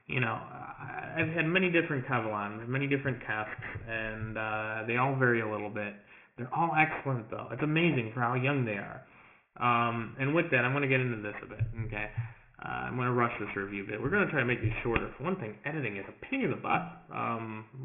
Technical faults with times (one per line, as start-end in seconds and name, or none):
0.00-17.85 aliasing